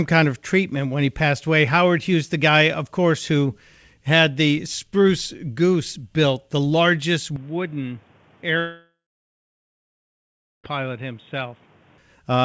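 From 7.36 s, just after "built the largest", the sound suddenly turns dull and boxy. There is no gap at the change. Nothing remains above 3.8 kHz, while before this the band reached 8 kHz, as a wideband call codec allows. The level drops by roughly 5 dB. A new background hiss appears, about 30 dB below the signal. This is likely an input switched to a poorer device, such as a headset in call mode. The narrow tone lasts until 11.98 s, when the fuller sound returns.

At 8.60 s a long network dropout starts. Audio stops arriving. The receiver stretches the last sound into a brief fading buzz. Then about 1.7 s of near silence follows. The sound resumes at 10.66 s. Roughly 2.04 s of the recording is simply gone. It was never played back. The cause is likely lost packets during that stretch.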